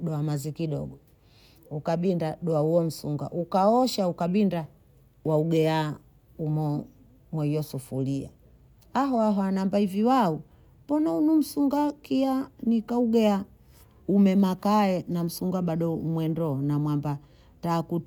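No technical faults can be heard anywhere in the recording; the speech signal stays continuous and intact throughout.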